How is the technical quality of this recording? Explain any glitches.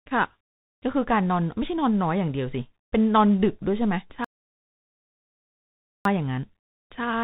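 The recording has two clear problems. Throughout, tandem speech coding passes the speech through CVSD, G.711 mu-law, then CVSD again, so each coder degrades the last one's output. Nothing survives above 3.8 kHz, and the result sounds rough and noisy rather than simply band-limited. From 4.25 to 6.05 s, an audio dropout to silence leaves about 1.8 s of silence, likely from a lost input. The gap has no room tone, so it is not a quiet pause.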